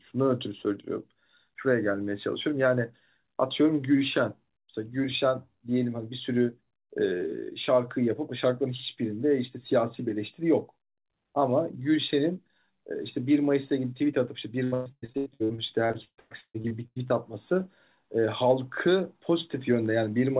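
From 14.64 to 17.12 s the speech turns choppy and robotic as fragments stutter and drop out. This is repeated packet loss: roughly eighteen gaps in quick succession, the longest about 138 ms. Each hole is papered over by stretching the preceding sound, so nearly half of that stretch is synthetic fill rather than real audio. Throughout, nothing is heard above 4 kHz, which points to a narrowband G.711 call codec.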